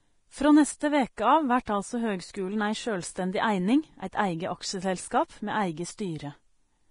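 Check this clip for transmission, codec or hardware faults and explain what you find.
Two faults are present: heavy lossy coding throughout, and two brief pre-echoes before sharp attacks.

Vorbis compression runs through the whole clip. Nothing is left above 10.6 kHz, and the remaining treble is hissy and grainy, with roughened speech tones. The likely cause is low-quality Vorbis coding, which fits a bitrate around 30 kbps. It lowered the cut-off and quantised the upper band so coarsely that fine detail became noise. A spectrogram shows a hard ceiling at 10.6 kHz with speckled, noisy texture beneath it.

Pre-echo occurs at 1.17 s, spreading about 14 ms, and at 1.65 s, spreading about 19 ms. Quantisation noise meant for a loud attack was spread across its whole transform block and leaked into the quiet gap just before it. Each attack is heard as a short hiss and a softened onset. The waveform shows a low noise smear before each transient.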